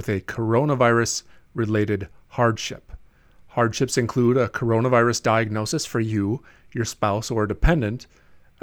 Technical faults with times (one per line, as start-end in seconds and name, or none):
5.55-6.11 drift correction step